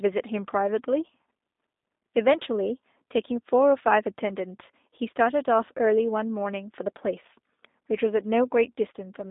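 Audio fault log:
Throughout: G.729 codec. The speech sounds narrow, thin and slightly rough and synthetic. Nothing passes above about 3.8 kHz, and the band runs roughly 250 Hz to 3.7 kHz. Each 10 ms frame is rebuilt from a filter, pitch and a few pulses, which fits an 8 kbit/s stream.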